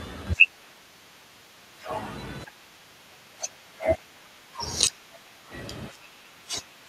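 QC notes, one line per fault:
4.25–4.29 s, echo leak: a very faint, brief scrap of the speech returns about 0.35 s after the original, sitting far below the voice. The likely cause is a far-end loudspeaker whose echo canceller let a fragment of its microphone pickup slip back into the call.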